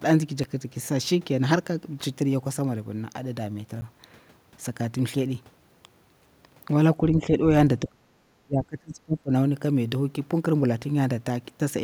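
At 0.44 s and again at 3.81 s the speech drops out for 5 ms and 10 ms: each is a block of digital silence, samples zeroed, most likely when the output buffer went unfilled. Each is heard as a tick or dip. The waveform shows a flat, near-silent stretch with abrupt edges, and the spectrogram shows a thin vertical blank.

From 7.12 to 9.32 s the speech is pulled down in three stretches, most likely speech suppressed in double talk, where an echo canceller mistook the talker for loudspeaker echo while both sides spoke. There is a slight dip of about 5 dB at 7.12 to 7.3 s, a near cutout of about 40 dB at 7.82 to 8.16 s, and a drop of about 30 dB at 8.44 to 9.32 s. The waveform envelope sags in these stretches, and the spectrogram fades and thins.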